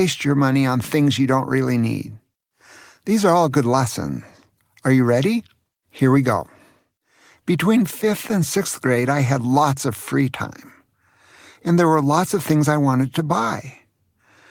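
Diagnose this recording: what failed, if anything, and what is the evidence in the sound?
Nothing failed; no fault is audible anywhere in this recording.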